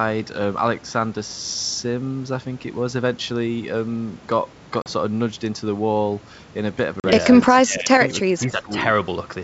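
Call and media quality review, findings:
Packet loss on an ADPCM call, 4.82–4.92 s and 7.00–7.07 s. Hard-edged silent holes of about 40 ms each, roughly two packets apiece. Gap concealed by silence only; decoder's adaptive predictor and step size drift from the sender's, so speech resumes with a click, level jump or brief roughness before re-converging over the following tens of milliseconds.

Speech suppressed in double talk, 7.47–8.0 s, 8.20–8.29 s, 8.46–8.8 s. Talker's level dips, deepest about 15 dB in the first stretch and about 10 dB in the later two. Likely echo canceller / suppressor misjudging simultaneous far-end speech as echo and attenuating the near talker.

Echo leak, 8.08–8.13 s and 8.40–8.45 s. Faint delayed copy of the speech, 0.3 s behind the original, about 25 dB and about 30 dB below it. Likely loudspeaker-side echo canceller not fully cancelling the acoustic path; residual sent back in short scraps.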